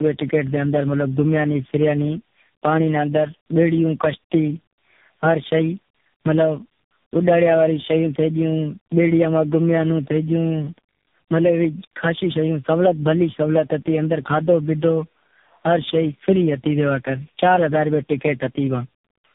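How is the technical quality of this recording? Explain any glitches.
The recording is poor throughout. The speech has been through tandem speech coding, with several speech codecs in a row. The audio is rough, muffled and warbly from start to finish, and nothing remains above about 3.7 kHz. The call seems to have crossed several differently coded links, each decoding and re-encoding the already damaged signal, so the errors compound. The mix of artefacts sets it apart from a single low-rate codec: a waveform-coder graininess, like CVSD or ADPCM, sits under the swirly smearing of a low-rate AMR-NB codec.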